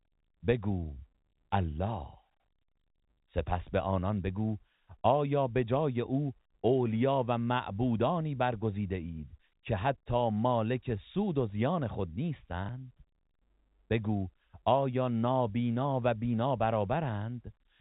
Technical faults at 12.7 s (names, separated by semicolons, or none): packet loss with last packet repeated